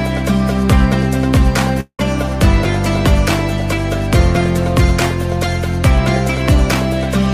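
Around 1.80 to 2.00 s the audio cuts out in what's likely a long network dropout: the last sound smears on as a fading buzz or hiss, drops to about 70 ms of silence, then resumes with roughly 180 ms of the original simply gone.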